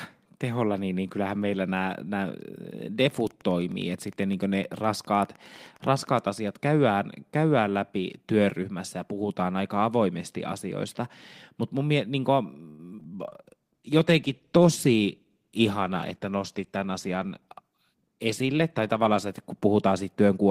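Wi-Fi interference runs from 2.99 to 6.47 s, ending just before "käydään käydään läpi työryhmässä". A nearby Wi-Fi radio's transmissions are being picked up and rectified by the audio circuitry, so its beacon, repeating every 102.4 ms, comes through as a steady ticking about ten times a second. It sits well beneath the speech, roughly 35 dB down, audible as a faint ticking under the voice rather than masking it.

Repeated packet loss with a robotic sound follows from 12.69 to 13.07 s, right after "mutta mun mielestä niinku". Over this brief stretch packets kept failing to arrive, and the receiver concealed each hole by extending the sound it had last received. Four holes come close together, the longest about 92 ms, with about 131 ms patched over and around 60 ms simply missing. Roughly a third of the span is concealment, so the speech turns choppy, with pieces missing.

A call bitrate drop starts at 13.19 s and lasts to the end of the clip. 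The sender's bandwidth estimate fell, and the encoder responded by spending far fewer bits, which fits a fall from about 32 to 14 kbps, held at the lowest rate for nearly 6 s. The coarser coding makes the voice rough and watery, and the top end is trimmed, leaving it duller and more muffled.

A jitter buffer speed-up falls inside that degraded stretch, from 15.36 to 16.20 s. The receiver's buffer had built up more audio than its target, so it shortened the backlog by cutting out small pitch-period-sized pieces repeatedly, around 70 ms in total. Playback runs at about 108% speed while pitch stays the same, so this portion of the speech sounds noticeably hurried.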